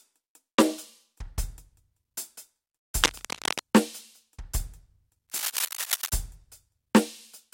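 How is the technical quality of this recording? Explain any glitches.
The music itself is marred by two glitches, both cable scratch noise. From 3.01 to 3.60 s, then 5.29 to 6.09 s, dense ragged crackle rides over the music, the first roughly level with it, the second a bit quieter, likely a worn lead or connector being jostled.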